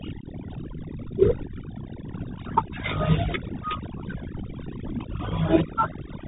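Right from the start there's overdone noise removal: bands near the noise estimate get pulled almost to nothing, so the background drops and breaks up into twinkling specks.

The whole clip also runs through a Bluetooth CVSD headset codec, coding each sample as a one-bit up-or-down step, which fits a 64 kbps link. Nothing above 3.8 kHz survives, the s sounds turn scratchy, and a granular hiss sits underneath.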